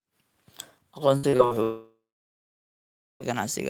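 Speech, with two problems. From 1.17 to 1.53 s there's repeated packet loss with a robotic sound: four short gaps, the longest 58 ms, each patched by stretching the last bit of audio, so about half that stretch is filler and it comes out choppy. Then at 1.63 s the sound smears into a fading buzz or hiss and goes quiet, with roughly 1.2 s of near-silence before audio returns at 3.22 s, minus about 1.6 s of content. That's most likely a long network dropout.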